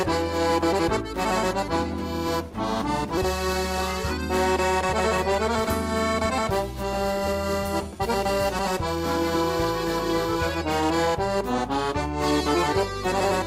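At 3.17 s the sound jumps abruptly forward, with no gap or fill, and about a second of audio is simply gone. This is a skip ahead: a stretch of audio was dropped while later audio was already waiting, and the two sides were spliced almost directly.

From 6.14 to 7.34 s, 7.92 to 8.45 s and 10.80 to 12.32 s the audio runs faster at unchanged pitch, about 9%, 11% and 8% fast, sounding hurried. This jitter buffer speed-up trims tiny pitch-period slices repeatedly to shed excess buffered delay.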